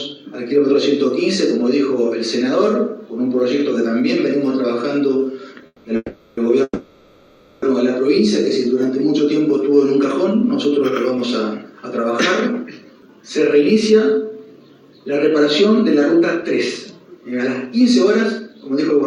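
Between 5.66 and 7.64 s there are three call audio freezes, at 5.66–5.86 s, 5.96–6.39 s and 6.63–7.64 s. In each, the last sound is held as a buzzy, fading tail for 180 ms, 410 ms and 990 ms, then drops to a brief silence of 20 to 40 ms before the audio resumes exactly where it stopped. The likely cause is delayed packets draining the jitter buffer, so the receiver stretched what it had. Nothing is lost, but the playback delay grows with each stall.

From 11.58 to 12.05 s, and again from 12.64 s to the end of the clip, the audio runs hurried at about 109% speed without any change in pitch. This is jitter buffer speed-up. Having built up surplus delay after the stalls, the receiver trimmed many short pitch-period slices to catch up. It removed about 50 ms in the first stretch and roughly half a second in the longer one.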